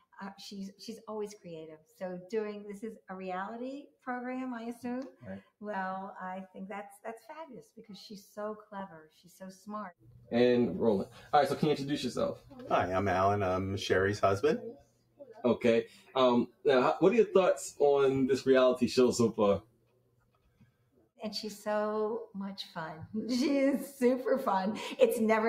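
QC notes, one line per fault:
Throughout: noise suppressor applied to music or sounds. A speech-tuned suppressor reads steady parts as noise, so the level pumps and thins by around 10 dB.
1.78–2.01 s, 3.87–4.07 s, 7.62–7.85 s, 9.99–10.29 s, 14.73–15.44 s, 15.85–16.15 s, 16.47–16.65 s, 19.61–21.21 s: sound cut by the noise suppressor. Sustained or decaying sound is pulled down by about 12 to 19 dB. The worst cuts are at 14.73 s and 19.61–21.21 s, the latter lasting about one and a half seconds.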